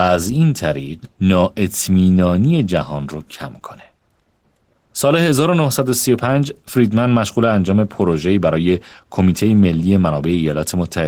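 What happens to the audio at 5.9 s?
At 5.9 s, as throughout the clip, Opus voice compression at a low bitrate, roughly 16 kbps, codes the speech's excitation coarsely, making it plainly hoarse and slightly robotic.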